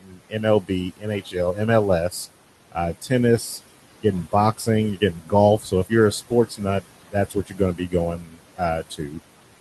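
From the start there are noise suppressor artifacts: the steady room noise gets pulled down by about 18 dB between phrases and rises again under the speech. Speech cut by the noise suppressor shows up from 0.0 to 1.61 s and again from 3.96 to 9.2 s. The suppressor mistakes quiet speech for noise and drops it by up to about 19 dB, so soft sounds and word endings go faint, roughly 0.7 s in the first stretch and about 1.5 s in the second.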